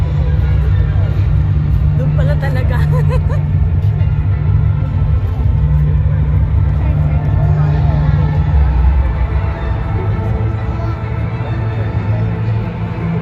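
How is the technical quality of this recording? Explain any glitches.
The technical quality is held back by one fault that runs through the whole recording: plainly audible codec damage, with the sound dull and grainy from start to finish.

MP2 compression is the likely cause, present throughout. MPEG Layer II divides the signal into 32 sub-bands and shares out a limited bit budget between them. At a rate that fits around 80 kbps, the upper bands are switched off or starved, and the bands that remain are coarsely quantised. The result is a muffled top end, with a gurgling, granular texture as bands flicker in and out.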